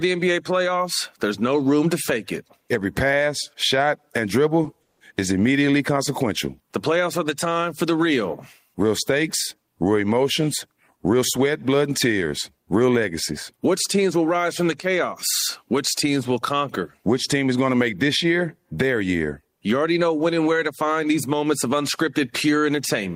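A call audio freeze runs from 4.82 to 5.03 s, just before "is immediately consequential". The receiver stretches the last sound into a short fading buzz or hiss for about 180 ms, likely because packets stalled in transit and the jitter buffer emptied. The speech then resumes where it stopped, with nothing lost, only delayed.

A jitter buffer speed-up follows "team is going", from 17.73 to 18.73 s. With too much audio queued, the receiver repeatedly trims short pitch-period slices, removing about a tenth of a second in total. The speech runs at 109% speed at unchanged pitch and sounds hurried.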